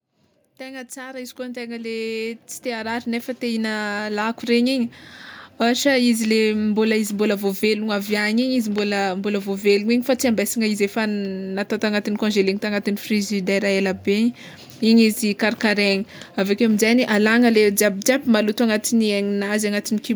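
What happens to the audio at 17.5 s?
Nothing goes wrong at 17.5 s; the speech there plays through intact, with no dropout, click or distortion.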